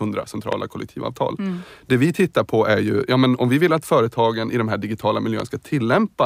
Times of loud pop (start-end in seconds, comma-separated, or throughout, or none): 0.52-0.55, 5.40-5.42